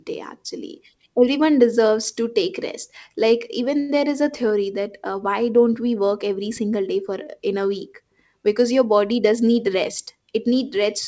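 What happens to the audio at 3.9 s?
A late packet left the jitter buffer empty, causing a short stall from 3.80 to 3.91 s: the speech is held and stretched for about 91 ms, then resumes without loss.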